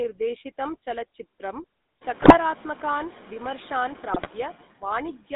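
Throughout the speech, GSM full-rate codec damage is plainly audible: a buzzy, gravelly roughness from pulse-driven vocal-tract coding, band-limited to 200 Hz–3.7 kHz, consistent with the 13 kbps full-rate coder. Noise suppressor artifacts also persist, with steady background lowered by about 9 dB frame by frame, so the residue sinks between phrases and rises under the speech. The room noise rises by about 18 dB at around 2 s.

From 2.22 to 2.38 s, and again from 4.10 to 4.31 s, GSM bit errors corrupt the decoder's filter, pitch and gain values, producing squawks, pops and gargling bursts.

From 5.18 to 5.32 s, speech is cut by the noise suppressor. About a tenth of a second of the ending is treated as noise and pulled down by up to about 9 dB, so it sounds swallowed.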